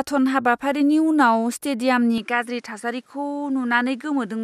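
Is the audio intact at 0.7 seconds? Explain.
Yes, at 0.7 seconds the speech plays through intact, with no dropout, click, distortion or other fault.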